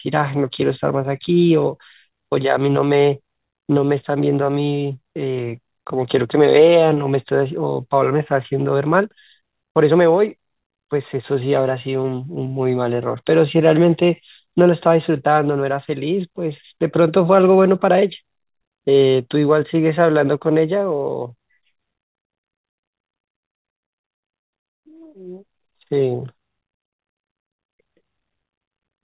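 No technical faults can be heard in the speech.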